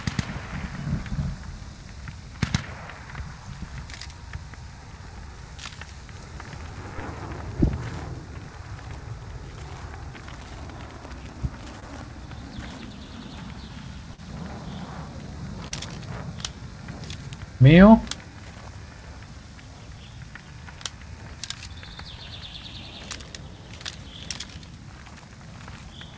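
Audio packets arrived too late for the decoder at 11.80 to 11.84 s, 14.14 to 14.20 s and 15.68 to 15.73 s, about 20, 40 and 20 ms missing. This is short concealed packet loss: the receiver extended the preceding sound to fill each gap, heard as brief smears or wobbles in band-limited audio with nothing above 8 kHz.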